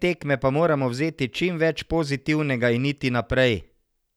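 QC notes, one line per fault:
No faults were heard in this speech clip. Nothing needs logging for it.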